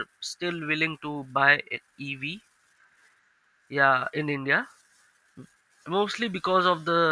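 No technical faults can be heard anywhere in this speech.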